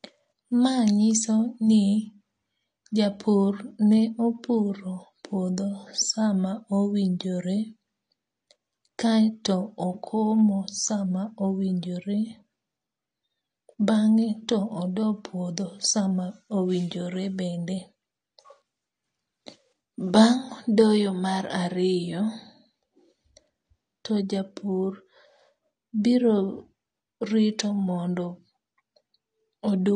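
From start to finish, the speech sounds dull and smeared, with nothing above about 9.7 kHz and a plainly audible warbling, fizzy texture on sibilants and held vowels. This is likely AAC compression, with AAC-LC at a low bitrate that fits roughly 32 kbps. The encoder drops the top band and coarsely quantises what remains. A plain low-pass filter would also remove the highs, but it would leave the rest clean, without this swirling, watery grain.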